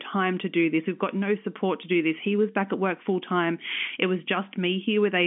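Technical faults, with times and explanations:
Nothing stood out on listening; the speech carries the narrow, band-limited character of an ordinary telephone line, with nothing above about 3.6 kHz, as expected of G.711 telephone coding working normally.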